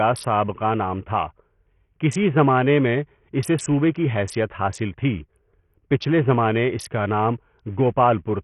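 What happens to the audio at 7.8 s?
At 7.8 s the speech is still passing through what is likely Bluetooth SBC compression, which runs the whole clip. The encoder's bit pool is starved, consistent with roughly 48 kbps, so its coarse sub-bands lose bits from the top down. Nothing survives above about 11.7 kHz, the remaining treble flickers in and out, and a gritty quantisation noise with aliasing clings to the speech at that moment and throughout.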